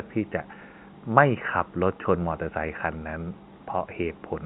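Speech over a telephone-band channel, with nothing above 4 kHz and room noise sitting about 53 dB under the voice, and no technical faults to report.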